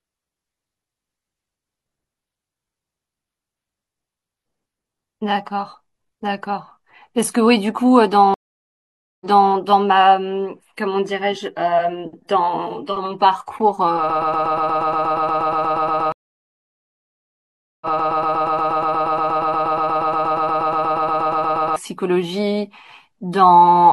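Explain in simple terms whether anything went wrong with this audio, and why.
Two things went wrong, one of them twice.

A stream reconnect happens at 8.34 to 9.51 s and again at 16.12 to 18.11 s. The connection dropped, the sound went silent for about 0.87 s and then about 1.7 s, and playback restarted with a fresh decoder, picking up 0.3 s earlier than where it stopped. That silence followed by a small jump back is the giveaway.

A broken-record loop runs from 14.1 to 21.76 s. A tiny piece of sound, about 0.12 s long, repeats 48 times back to back, likely because something in the chain stalled and kept resending its last fragment. Unlike a reconnect, it stutters rather than going quiet, and the audio that belonged there is lost.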